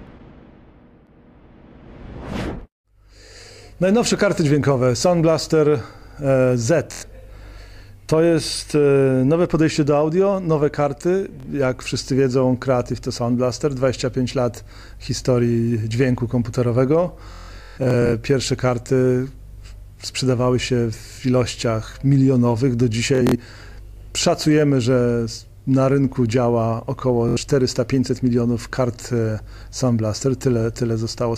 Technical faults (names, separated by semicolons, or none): Bluetooth stutter